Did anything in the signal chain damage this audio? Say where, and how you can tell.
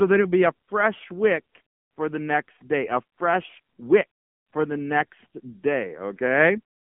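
Yes, the codec stage did the damage, and it's there for the whole clip. This is speech squeezed through the AMR narrowband mobile codec: nothing comes through above about 3.5 kHz, the bottom rolls off below roughly 150 Hz, and the voice has that buzzy, synthetic edge of a vocal-tract model rebuilt from a handful of pulses per subframe. The heavy artefacts point to one of the low AMR-NB modes, something like 6.7 kbps.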